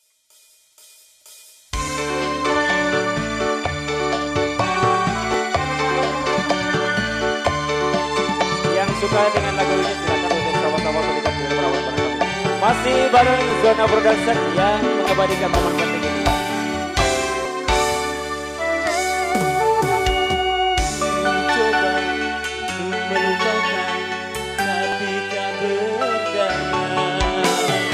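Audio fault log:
1.88, 5.34, 13.51, 17.45 and 24.92 s: dropped samples. Each is a single sharp click, a thin vertical line across the spectrum, with no sound audibly missing. The likely cause is under a millisecond of samples skipped, so the waveform jumps straight to a later value.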